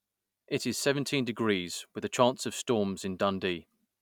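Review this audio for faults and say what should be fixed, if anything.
No faults can be heard in this speech recording. Nothing here needs to be fixed.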